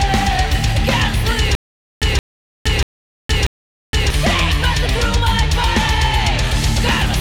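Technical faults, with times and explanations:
1.55–4.10 s, stutter with silent gaps: a 172 ms burst of the same sound plays four times, each followed by 466 ms of dead digital silence, so it returns every 638 ms at a steady pace. This is likely a stalled player or stream that replays its last fragment at each retry and then runs empty. A plain dropout would be a single silence. Here the identical repeated burst and its even rhythm set it apart, and the audio meant for that stretch is lost.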